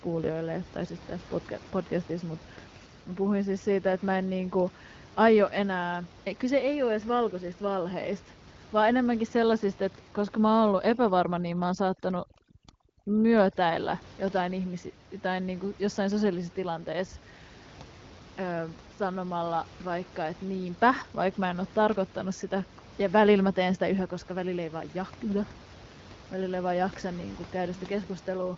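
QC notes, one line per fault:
10.63–14.03 s, overdone noise removal: a noise suppressor working far too hard clamps down on any frequency band it judges close to its noise estimate, dropping those bands to almost nothing for this stretch. The room noise underneath, sitting about 21 dB below the speech, collapses into near silence scattered with twinkling specks, and the quieter parts of the speech are pulled out along with it until the suppression lets go.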